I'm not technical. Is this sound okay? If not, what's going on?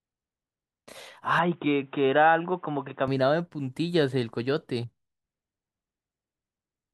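No. From 1.39 to 3.08 s the speech turns dull and boxy, with nothing above 3.8 kHz and faint new background noise, then clears again. The likely cause is an input switched to a poorer device, such as another microphone, during recording.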